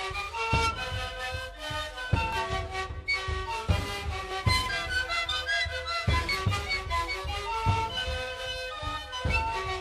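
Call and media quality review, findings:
Overlap between stream segments, three spots: 2.33–2.36 s, 4.31–4.34 s, 6.29–6.32 s. Tiny skips of roughly 36, 26 and 28 ms where the audio jumps ahead. Spacing of about 2 s fits 2-second segments. Probable component: segmenter or player stitching. Segment timestamps overlap, so the player trims the overlap even though that audio wasn't actually duplicated, and a sliver of real sound goes missing at each boundary.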